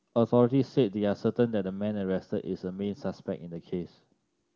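Nothing here calls for a fix: the speech comes through with the open, clear sound of AMR wideband (HD Voice) coding at one of its higher rates, and no technical faults turn up anywhere along the way.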